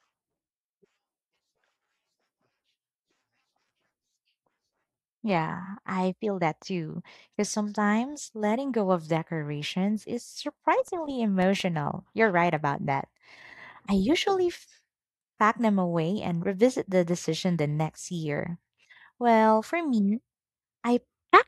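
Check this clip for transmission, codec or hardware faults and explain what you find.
One fault is present in this speech clip: CD scratch ticks. Between 10.88 and 11.78 s there are six tiny ticks, the longest only about 2 ms. A scratch on the disc wipes out more data than error correction can rebuild each time it passes under the laser, so the player patches or mutes those few samples. What separates this from random vinyl-style crackle is the regular spacing, roughly six to seven per second, following the disc's rotation.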